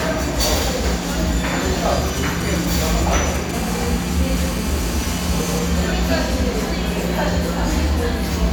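From 2.08 to 3.51 s, GSM signalling bursts break in: a nearby 2G phone sends short groups of radio pulses at the 217 Hz frame rate, which the audio circuit rectifies into galloping dit-dit-dit ticks and brief buzzes, roughly 15 dB below the sound. Their intermittent grouping distinguishes them from a continuous buzz.

From 3.54 to 5.59 s, a GSM phone buzz follows as the phone moves into a call and transmits in bursts 217 times a second. The rectified pulses give a hard, raspy, harmonic-rich drone about 14 dB below the sound. Unlike the preceding bursts, it holds steady without gaps.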